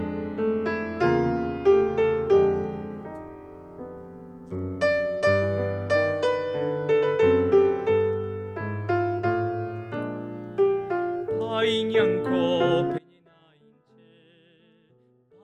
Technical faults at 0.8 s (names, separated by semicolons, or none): none